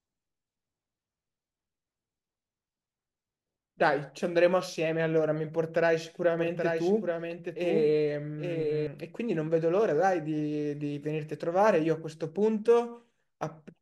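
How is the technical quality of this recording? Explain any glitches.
The recording has one glitch. From 6.39 to 8.87 s there is a doubled audio track: a second, full-band copy of the speech trails roughly 0.7 s behind, about 5 dB quieter. It is likely a second capture path or misaligned edit. On a spectrogram, the harmonic patterns repeat shifted in time, and the waveform shows overlapping envelopes that start and stop abruptly.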